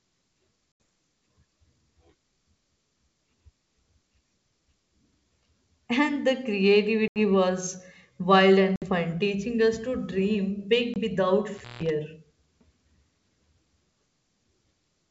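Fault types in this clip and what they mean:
Packet loss on an ADPCM call: four bursts of lost packets, 80, 80, 60 and 20 ms long, were filled with silence, leaving the decoder's predictor and step size out of step with the sender. Each hard-edged gap, one just before "was wild" and one after "teaching us to dream", returns with the speech slightly distorted.
Intermittent contact: a loose connection opened briefly around 11.5 to 11.9 s, cutting the speech for about 165 ms with crackle at the edges of the dropout and faint hiss left while the line was broken.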